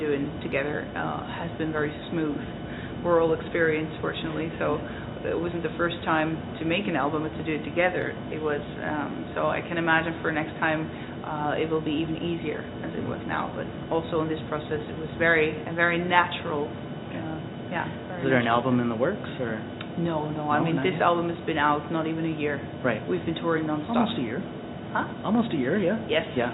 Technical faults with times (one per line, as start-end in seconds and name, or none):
none